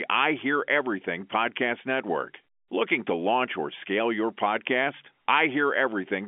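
Nothing stood out on listening to this telephone-band speech, which is carried by standard G.711 coding with its usual band limit at about 3.4 kHz.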